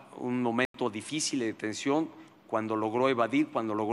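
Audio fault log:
0.65 to 0.74 s, block of digital silence: the sound drops straight to silence for about 93 ms, which fits a 4096-sample buffer the program didn't fill in time. There's no fade either way, so it's heard as a short hole.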